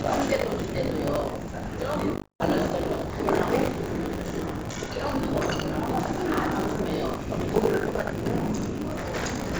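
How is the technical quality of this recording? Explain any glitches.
The recording has two faults: a constant tearing buzz, and one gap where the sound drops out. The band stops at 7 kHz, which fits a G.722 call path at 64 kbps.

Buffer tearing runs through the whole clip. The writer and reader of the playback ring buffer have slipped relative to each other, so about a third of each period carries audio from roughly 70 ms earlier, with hard joins on both sides. This produces a 50 Hz robotic rattle whenever sound is present, which fits 20 ms periods.

A long network dropout, likely the cause, spans 2.14 to 2.41 s. About 260 ms of audio never arrived. The receiver extended the last sound as a fading buzz, then fell to near silence for about 150 ms. Sound resumes at 2.41 s with the lost section missing.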